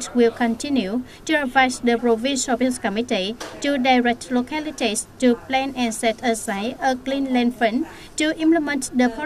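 No technical faults can be heard anywhere in the audio; the signal stays steady and intact throughout.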